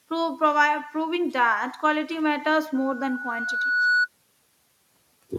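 Loudspeaker feedback squeal in this speech clip from 2.75 to 4.09 s: a 1.5 kHz tone swells over about a second to roughly 5 dB above the speech, as the microphone re-amplifies its own loudspeaker.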